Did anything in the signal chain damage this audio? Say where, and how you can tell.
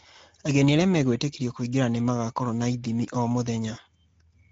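Yes. The Speex codec stage damaged it throughout: the speech sounds plainly hoarse and grainy, as a CELP coder with too few excitation bits would leave it, which points to a rate near 16.8 kbps. A spectrogram shows smeared harmonics and nothing above 7.7 kHz.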